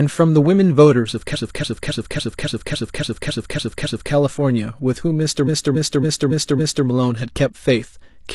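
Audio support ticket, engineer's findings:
Repeated frames, 1.30–4.09 s and 5.44–6.83 s. The same 0.28 s block of speech replays 10 times, then 5 times. Stutter. A writer or transport is sending a short run of compressed frames more than once. The duplication adds 2.79 s and 1.39 s.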